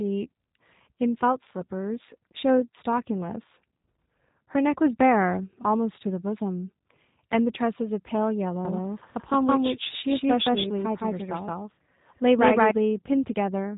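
G.729 codec damage runs throughout: the speech is rebuilt from a vocal tract model and sparse pulses, sounding rough and synthetic, with nothing above 3.8 kHz, which fits an 8 kbit/s stream. A doubled audio track follows from 8.65 to 12.71 s: an equally loud second copy trails roughly 150 ms behind, starting and stopping abruptly, likely from a second, slower capture path.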